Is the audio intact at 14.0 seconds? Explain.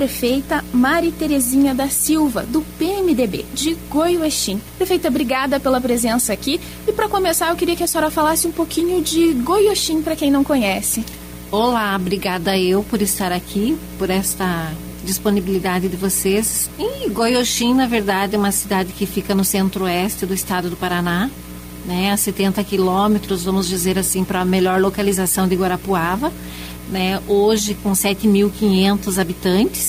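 Yes, the audio at 14.0 seconds is intact, with no dropout, click, distortion or other fault at that moment.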